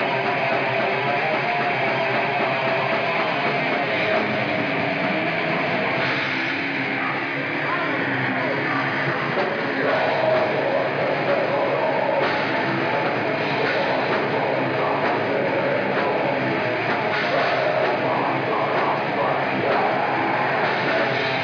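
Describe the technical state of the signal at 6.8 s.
At 6.8 s the signal is intact, with no dropout, distortion, glitch or other technical fault audible at that moment.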